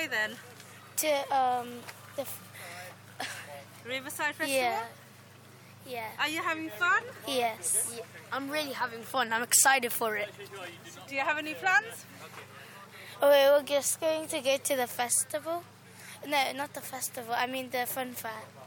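Nothing stood out on listening to the audio.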